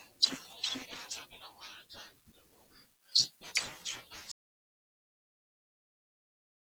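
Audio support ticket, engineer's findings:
Audio dropout to silence, 4.32 s to end (6.66 s). Speech cuts off abruptly into silence with no room tone. Likely input loss ahead of encoder (disconnected device, failed link or mute) while recorder kept writing silence.

Impact: final ~2.3 s of speech lost and unrecoverable, since nothing remains in the gap to restore. Next step: check input cabling, link stability and mute state on the capture chain.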